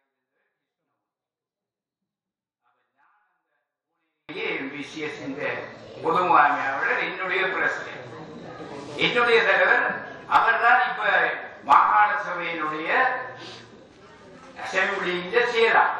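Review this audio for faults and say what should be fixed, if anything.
From 0 to 4.29 s there's a 24-bit alignment error that leaves it too quiet: the sound stays clean but sits about 48 dB down, nearly inaudible. The 24-bit samples were packed into the low bytes of 32-bit words and then read as full 32-bit integers, so every value came out shrunk. To prevent it, make sure whatever reads the stream agrees with the writer on sample format and justification, or shift the 24-bit data into the top bytes before handing it off.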